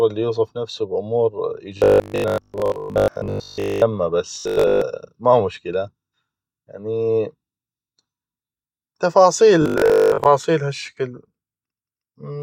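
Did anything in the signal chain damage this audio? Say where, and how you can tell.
Yes, robotic sound from repeated short buffers, at the driver or buffer stage, from 1.78 to 3.82 s (just after "يوصف نفسو ب امور"), 4.36 to 4.82 s (just before "ما مشكلة"), and 9.62 to 10.26 s. The speech becomes a rigid metallic buzz at 50 Hz, which fits a repeated 20 ms block, with most of the real audio skipped. The likely cause is late buffer delivery. Unlike mains hum, the buzz follows the speech and only appears in these bursts.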